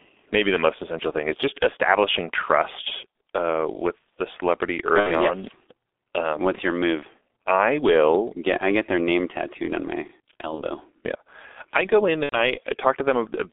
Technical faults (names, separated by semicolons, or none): G.723.1 codec; VoIP packet loss concealed by the speech codec